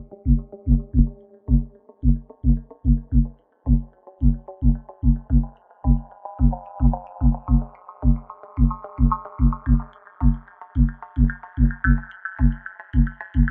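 Sounds, with overlap-add ripple the whole way through. Frames were rejoined with an overlap that doesn't sum flat, so the level dips by about 60 dB around 200 times a second, giving a harsh, metallic buzz with extra tones around each note.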